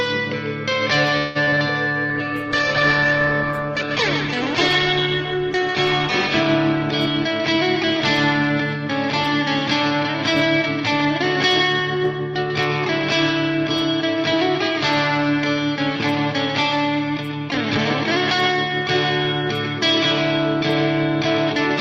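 Repeated packet loss (robotic sound) runs from 1.17 to 1.59 s. Four gaps open in quick succession, the longest 178 ms. The receiver patches 212 ms by extending the last sound and leaves 80 ms missing, so about half the span is concealed. The audio turns choppy, with pieces dropping out.

A call bitrate drop follows from 2.10 to 8.67 s. The bandwidth estimate fell and the encoder was pushed from 48 kbps down to 11 kbps, staying at its lowest for 2.54 s. At that rate Opus codes coarsely and trims the high frequencies, making the sound rough, watery or muffled until the bitrate recovers near 8.67 s.

A jitter buffer speed-up overlaps the end of that stretch, from 8.40 to 11.06 s. The buffer was holding more audio than it aims for, so the receiver repeatedly cut short pitch-period pieces, removing roughly a tenth of a second. Playback runs at 104% with pitch unchanged. A second speed-up from 11.79 to 12.20 s reaches 107% and removes roughly 40 ms, which is enough to sound hurried.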